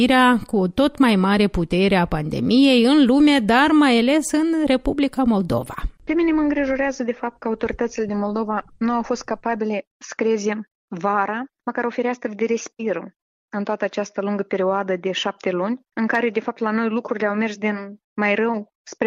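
No technical faults can be heard anywhere in the audio.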